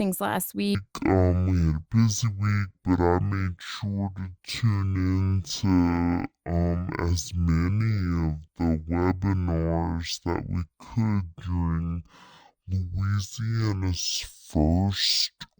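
It's a speech recording, and from 0.75 s right through to the end it's running at half speed and a full octave low, starting around "wind week". That's stereo read as mono: the left and right samples are interleaved, but they're being read one after another as a single channel, so every frame takes twice as long to play. You also get a fainter mirrored copy of the sound up in the top half of the spectrum.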